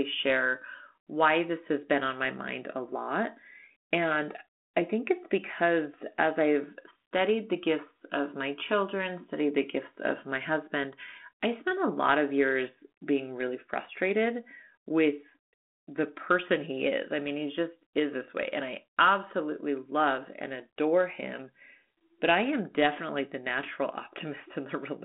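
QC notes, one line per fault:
No faults heard.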